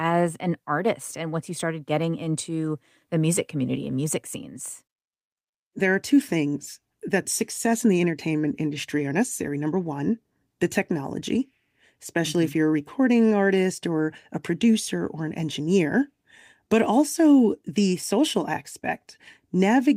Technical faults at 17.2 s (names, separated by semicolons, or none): none